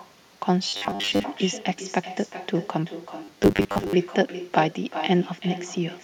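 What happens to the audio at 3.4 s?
At 3.4 s the speech falls inside a stretch of robotic sound from repeated short buffers, running from 3.24 to 3.93 s. The voice becomes a rigid, metallic buzz at 100 Hz that loosely tracks the speech. The likely cause is audio arriving too seldom, so about half the time is filled by looping the last 10 ms of sound while the real audio is skipped.

The clip also has echo with no canceller. A quieter, thinner copy of the speech trails around 0.4 s behind, about 13 dB down. This is the far end's loudspeaker feeding its microphone and returning the audio over the network uncancelled.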